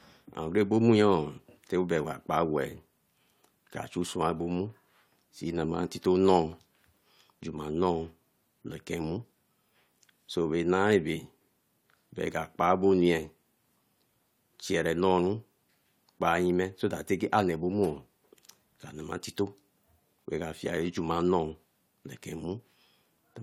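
Nothing in the speech recording stood out as a technical problem on listening.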